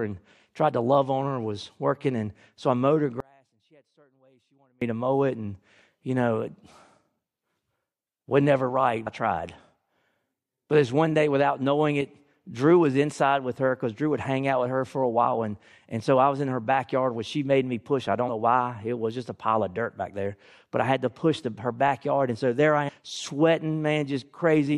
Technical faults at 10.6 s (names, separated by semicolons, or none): none